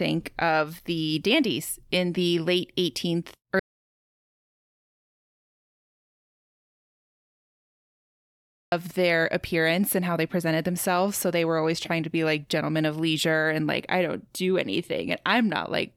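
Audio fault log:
3.60–8.72 s, audio dropout to silence: the speech stops abruptly mid-flow and the signal falls to silence for about 5.1 s, with no room tone or noise floor underneath, then cuts straight back in on "their appearance and how". The likely cause is a lost input, such as a disconnected device or a stray mute, while recording carried on writing silence. On a waveform it is a flat line; on a spectrogram, a fully black vertical band.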